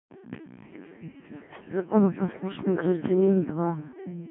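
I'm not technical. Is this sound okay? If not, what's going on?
No. The whole clip went through a Codec 2 vocoder, a radio voice coder that sends only a rough sketch of the voice and rebuilds it from simple tones. The speech comes out robotic and buzzy throughout, with nothing above about 3.5 kHz.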